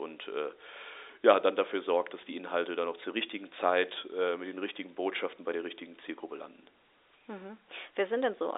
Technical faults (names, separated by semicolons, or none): none